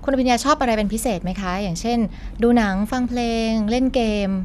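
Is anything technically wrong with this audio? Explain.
No, nothing technically wrong is audible in this speech recording.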